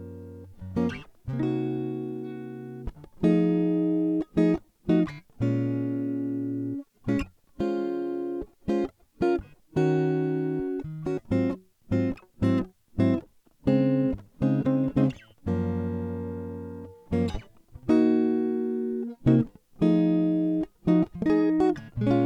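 The clip is music with two timing faults. At 11.17 to 11.19 s there is a skip ahead: roughly 0.7 s of the music is missing, and playback jumps straight to later material with no silence or fill across the join. Unlike a dropout, which leaves an audible hole or concealment noise, this break is a direct splice, so the phrase lurches forward. That points to audio lost in transit or discarded by an overfull jitter buffer while newer audio was already queued. From 13.19 to 15.42 s a jitter buffer speed-up follows. The receiver trimmed many short pitch-period slices to drain excess buffered delay, so the music runs at about 109% speed and the tempo visibly rushes, shedding roughly a fifth of a second in total. It differs from the skip because the time is removed gradually rather than in one jump, and from a simple resampling speed change because the pitch stays where it was.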